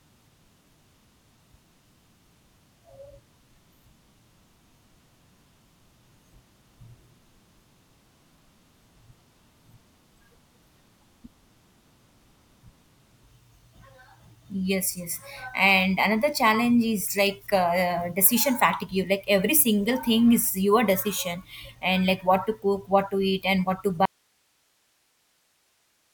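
The wanted signal was likely lost upstream while the path after the break stayed live, giving an audio dropout to a faint residue in this speech clip. At 24.05 s the speech cuts out abruptly, leaving only hiss roughly 45 dB below the signal through to the end.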